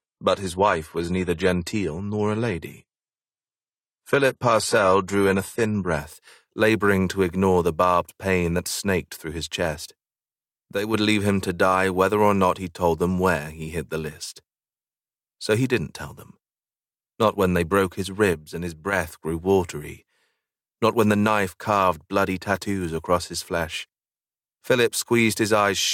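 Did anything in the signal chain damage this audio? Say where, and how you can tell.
Yes. At the network and playback stage, an adaptive stream starting at a low bitrate. From 0.0 to 6.0 s nothing sits above 14 kHz and codec artefacts are stronger. At 6.0 s quality jumps with no gap. That fits a 32 kbit/s AAC start stepping to 96 kbit/s.

One channel drops out twice, from 10.75 to 10.94 s and from 18.33 to 18.93 s. Each time the level falls abruptly by about 6 dB, then recovers. The likely cause is one stereo channel going silent in the wiring or playback path before a mono sum.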